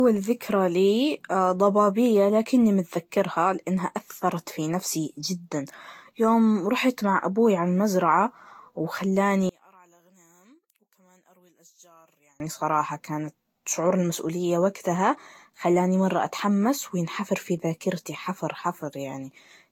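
From the start and through the whole speech clip, the sound is swirly, hollow and smeared, with consonant attacks blurred and a watery texture that one moderate-bitrate encode would not produce. This is generation loss, likely from the audio being decoded and re-encoded with Vorbis about seven times, at settings that fit a bitrate near 70 kbit/s. Each pass quantises on a shifted frame grid, so the artefacts compound. That compounding smear, rather than a single layer of bandwidth loss, sets it apart from one low-bitrate encode.

From 9.49 s to 12.40 s, the centred speech nearly vanishes in mono, dropping by about 33 dB and leaving only a faint residue. The likely cause is one channel inverted: one stereo side has reversed polarity, so the material the two channels share cancels when they are summed. A dropout or gate would silence everything equally, but here the difference signal remains, and full level returns at 12.40 s.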